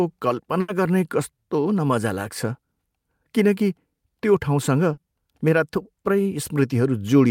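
At about 0.60 s there's a burst of packet loss lasting to roughly 0.69 s. Around 80 ms of the stream never made it in time, so the receiver stretched the last bit of speech it had and let it fade over those 80 ms, which gives you that held buzz or dying hiss. When the real audio comes back, it picks up further along, and the 80 ms in between is just gone.

Later, at about 4.93 to 4.98 s, there's a short concealed packet loss, only 40 ms this time. The decoder patched the hole by extending the previous sound for those 40 ms and then blended back into the real signal. It's quick, more a little smear or wobble than a dropout, and that 40 ms of real speech never arrives.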